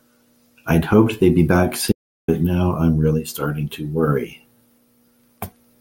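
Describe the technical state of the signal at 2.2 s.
Audio dropout to silence, from 1.92 to 2.28 s: the speech cuts to silence for about 0.36 s, with no room tone, likely from lost input while recording continued.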